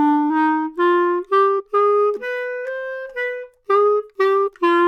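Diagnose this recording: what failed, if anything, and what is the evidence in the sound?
The codec stage failed: damaged data in a compressed stream, heard as brief glitches at 1.58–1.60 s and 4.46–4.48 s. Corrupt frames made the decoder misread data and resynchronise. The decoder's loss of sync and search for the next frame header set it apart from a plain dropout's silence or a single click.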